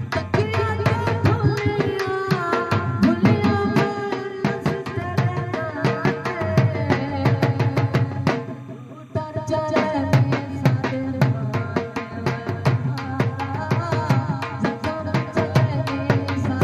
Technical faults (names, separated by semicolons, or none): timecode bleed